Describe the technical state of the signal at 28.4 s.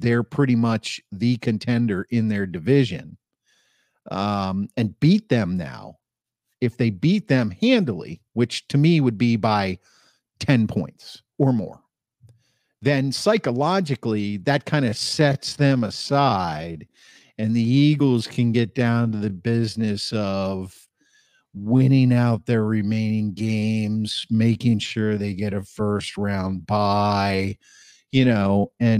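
At 28.4 s the speech is drawn out and drags, yet its pitch sits where it did before the change. The moment falls inside a time-stretched section running from 14.79 s to the end of the clip, slowed to about 0.71 times its original pace. The likely cause is software lengthening the audio to fit a duration and holding pitch steady by repeating short slices.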